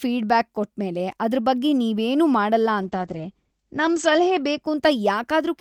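From 2.82 s to the end there's a call bitrate drop. The encoder gets squeezed from 48 kbps to 11 kbps and bottoms out for about 1.4 s. Bandwidth shrinks from 20 kHz to 8 kHz, so the speech turns muffled and coarse, with a rough, watery edge.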